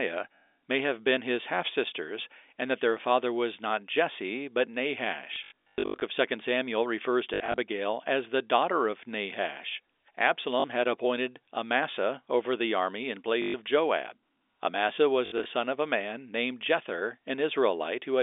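Around 5.34 to 6.02 s, 7.34 to 7.58 s (before "as the daughter of"), 10.6 s (before "had appointed"), 13.42 to 13.54 s (after "over the army in") and 15.26 to 15.46 s, there's packet loss with the last packet repeated. Dropped chunks get replayed, buzzing roboticly on runs up to 120 ms, which fits 20 ms packets.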